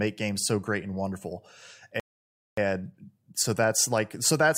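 At 2.00 s, right after "so great and wonderful", the speech drops into silence until 2.57 s, a rebuffering stall. The player exhausted its downloaded audio and halted playback until more data arrived. When sound returns it picks up exactly where it stopped, with nothing skipped or repeated. The gap simply inserts about 0.58 s of dead air, heard as an abrupt pause in the middle of the speech.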